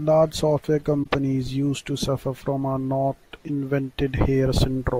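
At 1.03 to 1.06 s, just before "used to suffer from", a corrupt frame concealed by the decoder covers about 32 ms, which fits a single damaged frame. On a spectrogram it shows as a brief faded or smeared vertical band, with no click spike.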